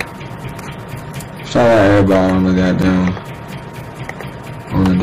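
Hard clipping affects the sound in two stretches. From 1.55 to 3.09 s the signal is driven roughly 12 dB past what the stage can pass, so peaks are sheared flat and every loud moment carries a harsh, gritty fuzz. The flat tops generate strong upper harmonics. From 4.75 s to the end at 5.03 s the overload is about 6 dB, giving lighter crackle on peaks.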